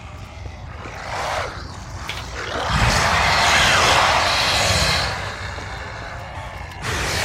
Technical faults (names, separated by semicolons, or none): broken MP3 bit reservoir